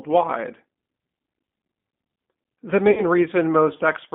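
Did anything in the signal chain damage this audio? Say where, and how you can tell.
Yes. At the codec stage, G.729 coding runs throughout: the speech is confined to roughly 200 Hz to 3.5 kHz and sounds rough and synthetic, which fits 8 kbit/s G.729A.

At the network stage, VoIP packet loss concealed by the speech codec appears from 2.91 to 3.03 s. About 60 ms of audio is missing, and the decoder stretches the last sound into a fading buzzy tone or coloured noise.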